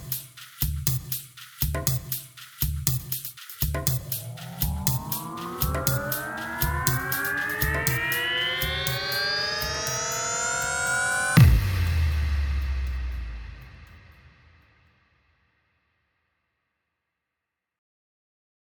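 No faults can be heard anywhere in the recording.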